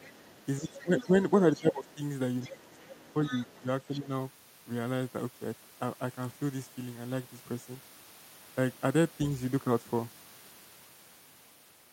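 From 0.0 to 1.23 s, a faint second voice sits under the speech, about 25 dB below it. This is the other side's voice leaking through. The far end is likely playing on a loudspeaker, and the echo canceller leaves a residue in the microphone. It returns at 1.55 to 1.94 s and 2.42 to 3.62 s, now about 20 dB down. A brief scrap follows at 3.93 to 3.98 s.

Overlapping these, the main speech dips. This is speech suppressed in double talk. From 0.59 to 1.13 s it drops by about 10 dB. From 1.59 to 2.0 s and 2.47 to 3.68 s the drops reach about 15 dB. A short dip follows at 3.99 to 4.1 s. The likely cause is both sides talking at once. The canceller cannot split the talker from the echo, so it turns everything down.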